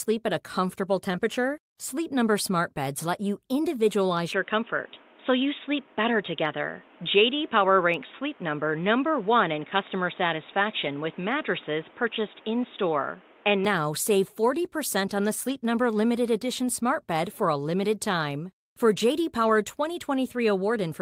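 From 4.33 to 13.65 s the sound turns dull and boxy with no gap or level jump, likely an input switched to a poorer device. On a spectrogram everything above 3.8 kHz vanishes, and a new noise floor sits about 30 dB below the signal.

At 10.85 s and 15.49 s, a lost packet rebuilt from error correction fills 20 ms each time with a rough, noisier patch, with no dropout visible in the waveform.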